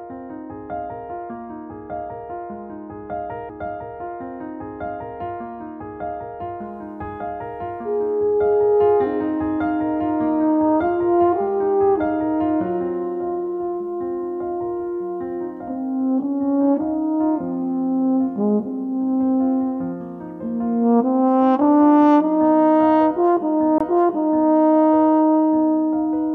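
CD skips at 3.49 s and at 23.78 to 23.81 s: the laser lost its track and landed on another turn of the disc's spiral, so playback mutes for a split second, about 20 ms in the second case, and resumes from a different point, heard as a tick and an abrupt jump in the sound.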